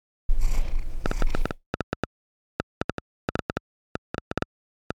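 From 1.06 s right through to 4.92 s there's a train of clicks sitting on top of the sound: about 6.5 per second, unevenly spaced, around thirty in all, each much the same sharp little tick. They poke out well above the material, roughly 10 dB over it, so you hear them plainly even in the gaps. The likely cause is interference from nearby equipment or a faulty connection or power supply injecting pulses.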